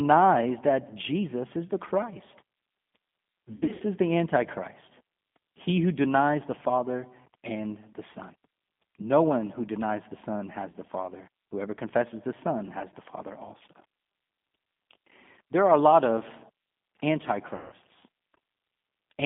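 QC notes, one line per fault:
throughout: G.729 codec. The audio is confined to a 150 Hz to 3.5 kHz line band and carries a rough, slightly synthetic grain. That fits a low-rate (about 8 kbit/s) G.729A coder rebuilding each 10 ms frame from a vocal-tract filter, a pitch predictor and a handful of pulses.
3.56–3.83 s, 10.70–10.75 s and 17.56–17.73 s: VoIP packet loss concealed by the speech codec. Missing frames were filled by extending the last pitch and filter with falling gain, so the sound smears into a fading buzz. The first gap is about 160 ms of loss scattered over 240 ms, the longest run being 60 ms. The second is a brief 40 ms dropout, and the third is 160 ms of loss. Each leaves the audio weak for a short while after.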